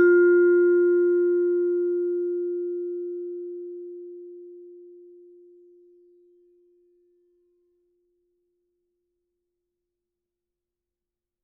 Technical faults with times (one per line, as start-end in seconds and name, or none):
none